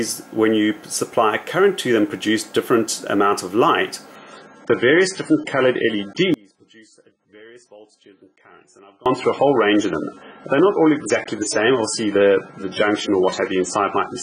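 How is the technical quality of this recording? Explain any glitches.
The technical quality is poor, with two faults.

From 4.16 s to the end, an adaptive stream at a lower bitrate switches suddenly to a thinner, smeared sound. Nothing survives above 9.7 kHz, and a spectrogram shows a flat ceiling.

From 6.34 s to 9.06 s, an audio dropout to a faint residue lasts 2.72 s. It was likely a lost signal with the path still live. The waveform collapses abruptly to a thin trace about 30 dB down.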